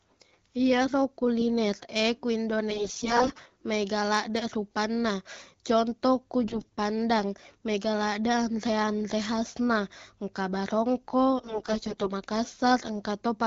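AMR bit errors hit this speech clip from 2.70 to 3.43 s, 6.44 to 6.72 s and 11.38 to 12.09 s. The voice there turns hoarse, scratchy and gargly while its pitch and level roughly hold, harshest in the short middle burst, where around a fifth of the weaker bits are corrupted. Flipped low-priority bits slip past the frame checksum, so the decoder misplaces its excitation pulses and mis-sets fine pitch, gain and spectral detail.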